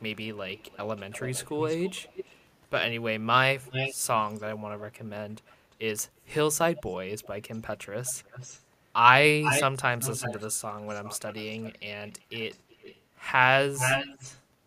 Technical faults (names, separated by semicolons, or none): echo leak